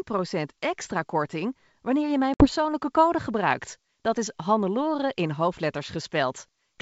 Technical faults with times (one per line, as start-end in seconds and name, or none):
2.34-2.46 packet loss on an ADPCM call